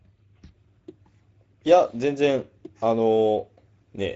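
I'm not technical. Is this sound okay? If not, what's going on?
No. The speech has Speex codec damage from start to finish. This older voice-chat compression rebuilds speech from a rough model, and it's audibly straining here. Voices sound noisy and hoarse, and nothing is heard above about 7.7 kHz.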